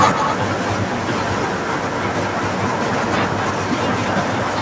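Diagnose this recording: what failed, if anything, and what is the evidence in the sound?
A second copy of the speech trails the original by about 240 ms: from 0.13 to 0.39 s at near-equal level, then from 1.26 s to the end, somewhat quieter. This echo leak points to call processing, likely a far-end echo canceller missing loudspeaker pickup.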